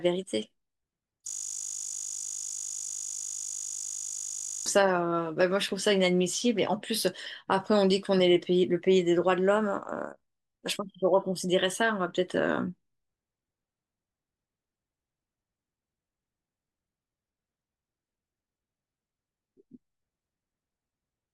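From 1.28 to 4.66 s a system hang loop replaces the speech with a steady 50 Hz buzz. The hardware kept replaying one 20 ms buffer while the system froze. The exact, pitched repetition sets it apart from a jittery stutter or a silent dropout.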